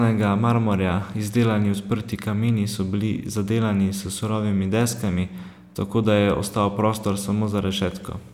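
No dropouts, clicks, distortion or level jumps are audible anywhere in this speech recording.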